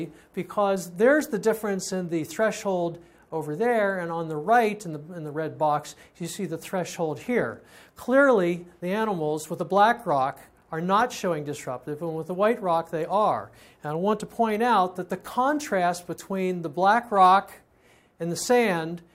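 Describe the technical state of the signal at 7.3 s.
No fault is present at 7.3 s, and the signal runs intact and continuous through that moment.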